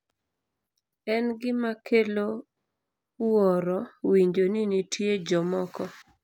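Speech with buffer tearing from 0.0 to 0.8 s. A robotic rattle buzzes at 200 Hz over the sound there, which points to a buffer period of 5 ms. The writing program and the playback hardware have drifted so they cross inside each period. A small sliver of every buffer, a couple of percent, still holds audio from about 10 ms earlier. Hard joins on both sides of that sliver make the buzz.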